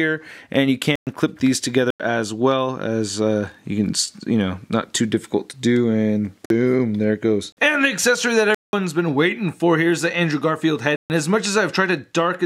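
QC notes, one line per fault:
0.96 to 11.10 s, block of digital silence: six dropouts, at 0.96 s (113 ms), 1.90 s (93 ms), 6.46 s (46 ms), 7.52 s (46 ms), 8.55 s (186 ms) and 10.96 s (139 ms). Each cuts hard to silence and back. Most of the lengths fit whole buffers of 2048 samples, which points to buffers likely not filled in time.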